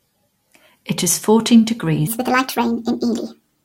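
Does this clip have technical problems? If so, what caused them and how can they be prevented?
Yes. After "is fourteen", from 2.07 s to the end, speech turns high and hurried, 1.5 times faster and about 7 semitones up. This wrong sample rate fits 32 kHz audio played at 48 kHz without conversion. Prevent it by resampling whenever the recorded and playback rates differ.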